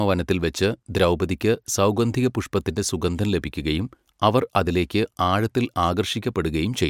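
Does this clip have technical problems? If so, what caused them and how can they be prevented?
No, there are no technical faults in this clip.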